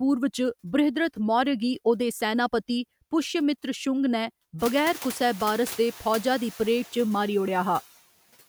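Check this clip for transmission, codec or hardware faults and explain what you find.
One fault runs through the whole clip.

Noise suppressor artifacts, throughout: the suppressor cuts bands it judges to be steady noise by about 13 dB, frame by frame, so the background dips between words and returns beneath them. The room noise that rises by about 22 dB around 4.5 s, settling about 20 dB below the speech, makes this pumping easier to hear.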